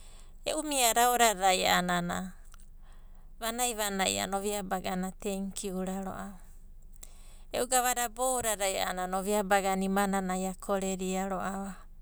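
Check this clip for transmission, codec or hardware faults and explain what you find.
Nothing in the speech stood out as a fault on listening.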